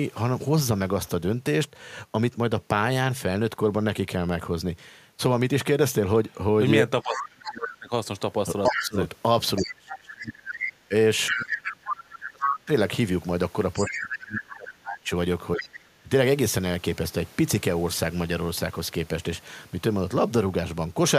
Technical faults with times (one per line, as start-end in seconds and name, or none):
7.02-7.50 other side's voice leaking through
7.03-12.71 speech suppressed in double talk
8.66-12.52 other side's voice leaking through
13.76-14.16 other side's voice leaking through
13.88-16.10 speech suppressed in double talk
15.58-15.66 other side's voice leaking through